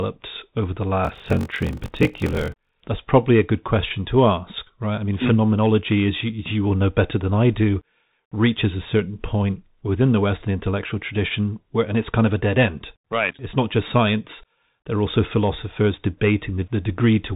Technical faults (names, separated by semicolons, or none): Bluetooth CVSD headset codec; block size mismatch (padded)